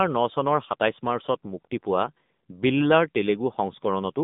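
From start to finish the speech carries AMR narrowband mobile codec damage, and it's plainly audible. Nothing gets through above 3.8 kHz, the band sits at roughly 150 Hz to 3.7 kHz, and the buzzy, synthetic edge points to a low-rate mode near 8 kbit/s.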